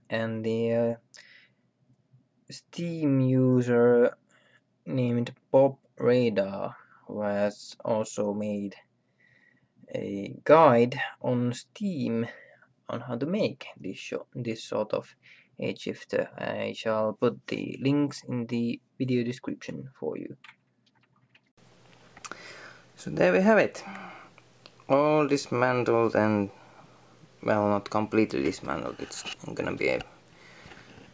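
No dropouts, glitches, distortion or other transmission faults occur anywhere in the clip.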